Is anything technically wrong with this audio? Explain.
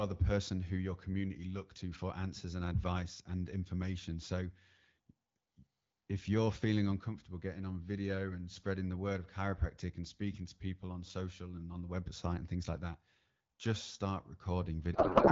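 Yes. From 14.93 s to the end at 15.31 s, the speech gives way to a codec payload misread. The AMR wideband stream was packed in octet-aligned form but read as bandwidth-efficient. The decoder therefore finds its fields at the wrong bit positions. The frames still look valid, so it decodes them without complaint. What comes out is garbled noise and warble that barely tracks the speech. Before this, the 12.65 kbit/s AMR-WB coding sounds clear, with light codec damage.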